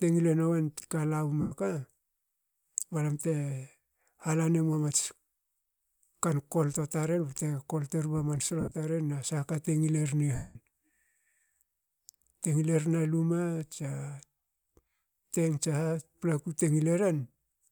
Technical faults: lost LE Audio frames

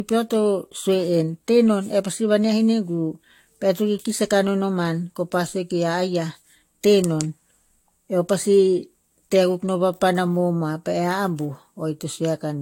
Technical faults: transcoding between lossy codecs

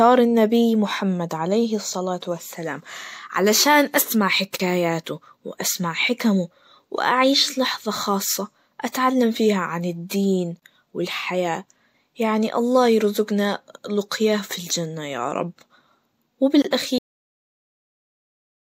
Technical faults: gap at a join of encoded pieces; cut-off end

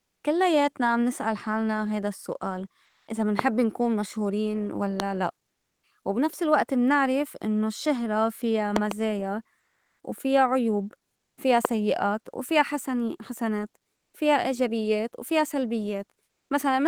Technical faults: comfort noise in place of the background; loud pop

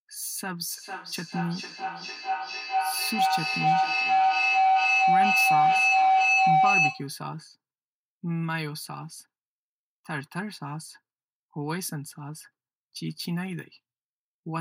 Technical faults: feedback howl

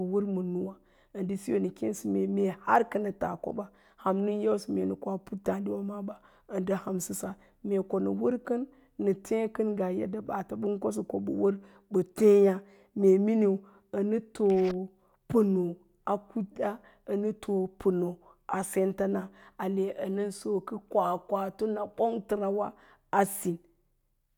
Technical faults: none

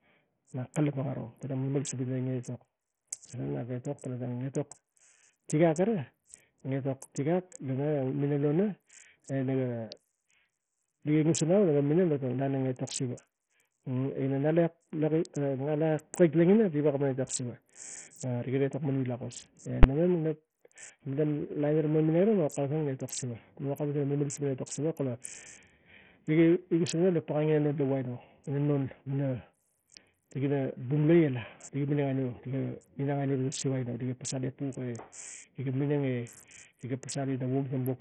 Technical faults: Bluetooth SBC compression; invalid numbers at full scale

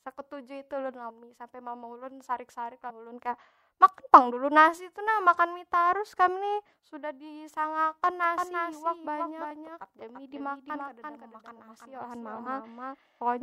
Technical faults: compressed frames skipped; doubled audio track

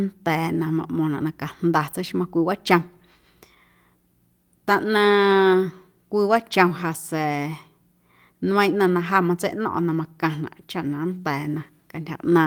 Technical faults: none

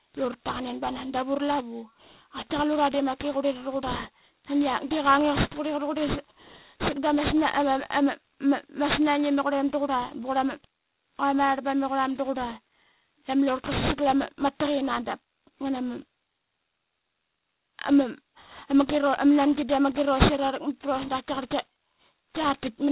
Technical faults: aliasing

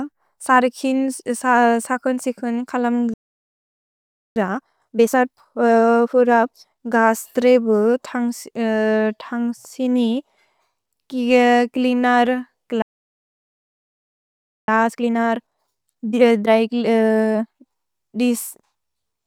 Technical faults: playback stall; time-compressed catch-up

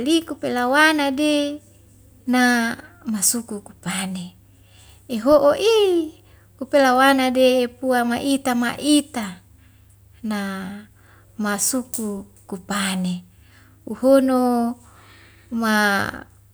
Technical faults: none

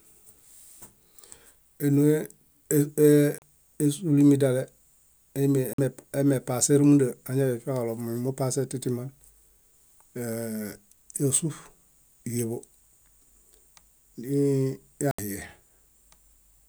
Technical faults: Bluetooth stall

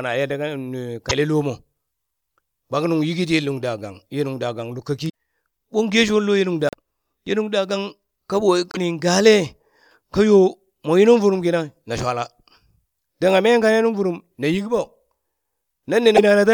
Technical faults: broken MP3 bit reservoir

